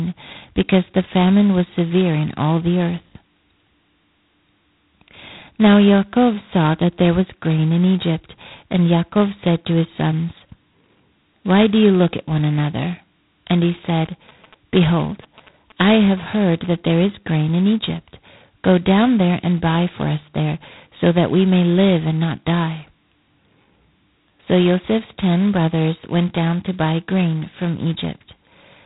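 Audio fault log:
Throughout: G.726 ADPCM. The speech was coded at 16 kbit/s, leaving only 2 bits per sample to describe each sample's difference from an adaptive prediction, so every coding step is coarse. The result is heavy damage: a harsh, rasping hiss that swells and fades with the speech level, riding on every syllable. Nothing above 3.9 kHz survives, so the sound is thin and dull at the top.
13.97 to 16.66 s: GSM signalling bursts. A nearby 2G phone was signalling rather than carrying a call, sending short groups of radio bursts at a rate of 216.7 Hz. The audio circuitry rectified that RF energy into the signal path. For about 2.7 seconds, ending just before "there is grain in", a galloping dit-dit-dit of brief 217 Hz buzzes sits about 25 dB below the speech.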